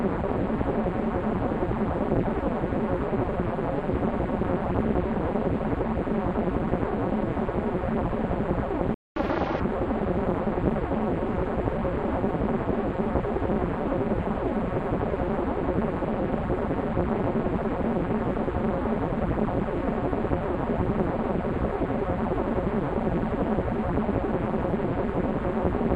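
At 8.94 s the sound cuts out in mid-flow. Silence holds until 9.16 s, a gap of about 0.22 s. This is a playback stall. The output had nothing to play for that span. The likely cause is the player running short of data, or its thread being held up. Either way, nothing reached the output until it recovered. The break is abrupt and clearly audible.

From 9.16 s to 9.60 s comes catch-up at higher speed. The player works through its backlog by resampling. Everything runs at 1.5 times normal speed. Pitch rises with it, by roughly seven semitones. The sound sounds hurried and shifted upward. At that rate the short burst wins back about all of the lost time. At 9.60 s the fast section ends.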